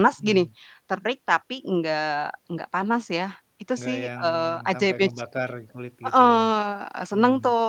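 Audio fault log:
Nothing to log here; this speech clip has no faults to report.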